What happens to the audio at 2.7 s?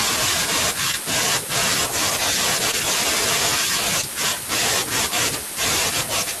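Short concealed packet loss occurs from 2.71 to 2.75 s. About 20 ms of the speech never arrived in time. The receiver filled the gap by extending the preceding sound for roughly 19 ms, then blended back into the real signal, leaving a brief smeared patch.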